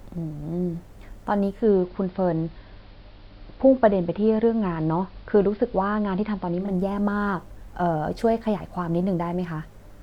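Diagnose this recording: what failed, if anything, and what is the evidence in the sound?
The failure is at the receiver: digital radio blending to analogue. At 1.50 s the speech cross-fades over about 182 ms into the station's AM broadcast, and it returns to digital at 6.75 s. The level drops by about 1 dB, and a faint hiss sits well below the speech. The hybrid radio lost its digital stream and fell back to the band-limited AM signal.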